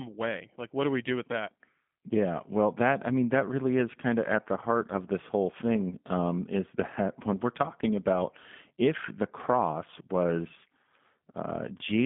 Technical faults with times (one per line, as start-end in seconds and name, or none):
0.00-12.05 G.729 codec